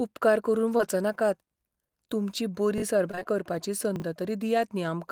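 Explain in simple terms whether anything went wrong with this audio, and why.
Three things went wrong while this speech was sent over the network.

Short concealed packet loss: at 0.77 to 0.81 s, about 20 ms of audio arrived too late. The receiver filled the hole by continuing the previous sound, which leaves a brief smear or wobble.

Chunks out of order: at 2.78 to 2.82 s, a 20 ms piece played one slot late, and at 3.96 to 4.02 s another played two slots late. Nothing is missing, but each spot sounds jumbled.

Repeated packet loss (robotic sound): from 3.11 to 3.27 s, four separate gaps, the longest 23 ms, were patched one after another. About half of that stretch is filler, so it sounds choppy.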